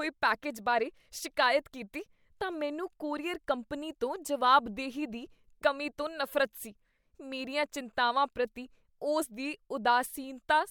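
No technical faults are audible.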